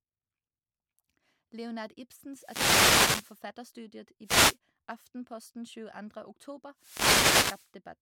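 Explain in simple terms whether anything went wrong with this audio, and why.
Bursts of hissing static wash over the voice at 2.33 to 3.43 s, 4.23 to 4.57 s and 6.76 to 7.72 s. These are wireless microphone noise hits: the radio link weakens as reflected signals cancel, and receiver noise rises to cover the sound.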